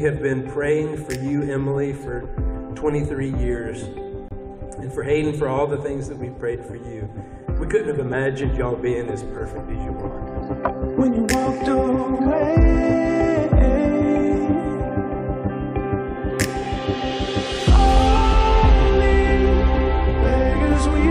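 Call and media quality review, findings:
Corrupt frame muted, 4.28 to 4.32 s. Decoder rejected bit-damaged compressed frames; player substituted silence. Symptom: abrupt dropout about 38 ms long, hard onset, consistent with two roughly 20 ms frames lost. Component: decoder/concealment path. Timeline intact, no stretch or skip; audio resumes on schedule after the gap.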